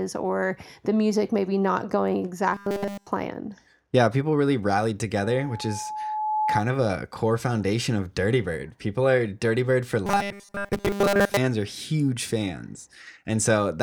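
Right after "music maybe not going", from 2.53 to 3.07 s, the speech goes robotic: a rigid, metallic 200 Hz buzz over the whole stretch, likely from repeated short buffers, with the last 5 ms or so looped because fresh audio wasn't arriving in time.

Then at 5.22 s, after "people really rallied", there's a loudspeaker feedback squeal. The mic is hearing its own speaker, and an 857 Hz tone takes off, swelling over about a second to roughly speech level before dying at 6.63 s, just ahead of "of a core foundation".

The robotic sound returns from 10.06 to 11.37 s, just before "are huge": the same 200 Hz repeat buzz, this time covering most of the stretch rather than all of it.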